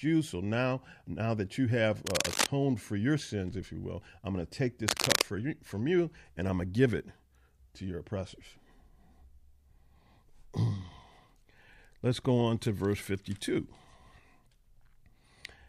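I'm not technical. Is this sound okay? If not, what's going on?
No. Twice, a rough scratching, rustling noise sits on top of the speech, from about 2.1 to 2.5 seconds and again from about 4.8 to 5.2 seconds. Each burst is roughly as loud as the speech itself. This is cable scratch noise, likely from a worn cable or a loose plug being moved. When that happens, its electrical contact flickers rapidly, and those flickers come through as crackly bursts of noise.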